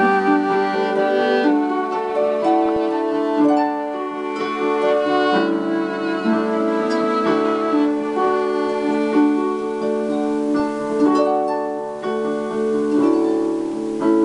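DAB burbling appears from 2.66 to 2.77 s and again, longer, from 10.60 to 10.82 s. Bit errors at a low rate slipped past error correction and corrupted the coded audio, so short blips of noise appear in single sub-bands. A spectrogram shows scattered bright short blocks in isolated bands.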